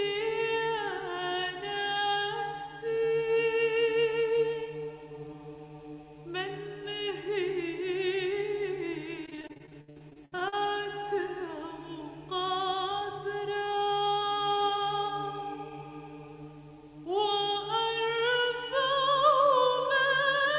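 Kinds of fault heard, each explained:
Repeated packet loss (robotic sound): From 9.26 to 10.56 s the sound turns choppy, with a rapid run of short holes, the longest about 64 ms. Packets kept going missing or arriving too late, and each hole was patched by stretching out the last good fragment before the next loss arrived. About 37% of that stretch is concealed material rather than the original sound, which leaves it choppy with pieces missing.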